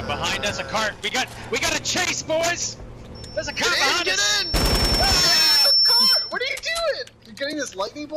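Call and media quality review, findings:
Acoustic loop between loudspeaker and microphone, gain above unity at 5.4 kHz. Loudspeaker feedback squeal, 3.15–6.45 s: single 5.4 kHz tone swelling over roughly two seconds, peaking about 5 dB above the program audio.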